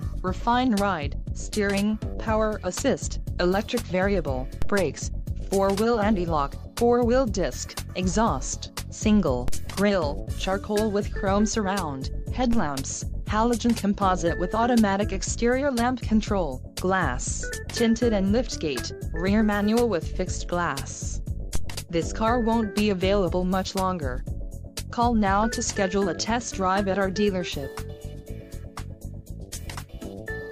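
A DC step occurs four times, at 4.62, 9.48, 12.53 and 21.55 s. At each point the waveform's zero line abruptly jumps to a new offset, about -15 dBFS at the first two and about -16 dBFS at the last two. A 2 Hz high-pass then gradually pulls the baseline back toward zero. Each sudden shift is heard as a short, low thump, and its soft tail dies away within a fraction of a second.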